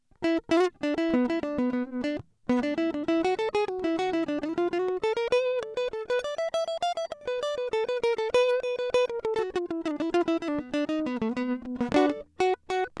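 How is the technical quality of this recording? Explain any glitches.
The technical quality of this music recording is sound, with no glitches to explain.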